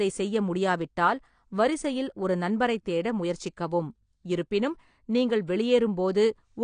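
Throughout the speech, nothing sounds above 9.8 kHz. Sibilants are dull, smeared and fizzy. Likely AAC compression, fitting a bitrate near 32 kbps.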